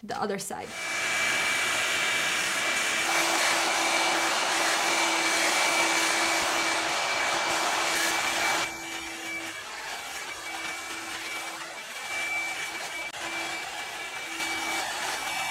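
Nothing here goes wrong at any point; the audio runs without a single technical fault to point out.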